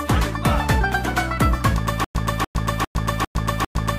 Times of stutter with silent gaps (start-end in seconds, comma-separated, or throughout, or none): 2.04-3.98